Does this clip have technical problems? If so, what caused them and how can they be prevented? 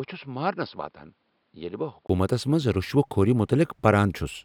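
Yes. From the start to 2.09 s the speech sounds dull and boxy, with nothing above 5.3 kHz, a level roughly 10 dB lower, and faint background noise well below the voice. At 2.09 s a 20 ms silence is followed by fuller, brighter sound. This is likely an input switched to a poorer device, such as a headset's call profile, whose narrower band, quieter gain and different noise floor apply until the system changes over. To prevent it, lock the recording input to one chosen microphone and turn off automatic device switching.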